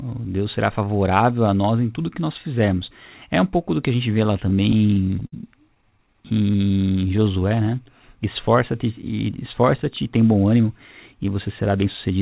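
Packets arrived late, so the jitter buffer kept running dry, producing repeated stalls (stutter) from 4.24 to 5.34 s, just after "que a gente vê", and again from 5.74 to 7.59 s. The receiver stretched the last sound into each gap, the longest 58 ms, so the speech drags and hiccups without losing anything.

Later the buffer held too much audio, and the receiver trimmed pitch-period slices to catch up. This jitter buffer speed-up makes the speech run about 11% fast from 9.87 to 10.67 s and 8% fast from 11.14 to 12.11 s, hurried but at unchanged pitch, over the narrowband G.711 call sound.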